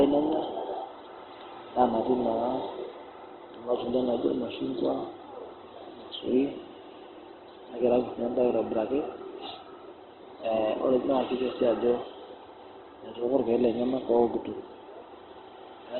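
Heavy Opus compression likely accounts for the damage throughout this speech clip. The sound points to a very low bitrate, around 12 kbps, with the encoder in its music-oriented CELT mode and squeezed to narrowband. Nothing reaches above about 4.2 kHz, so the whole recording is dull and band-limited. Starved bands are filled with folded or noise-like content rather than left empty, which makes the tonal parts of the speech sound rough, grainy and noisy.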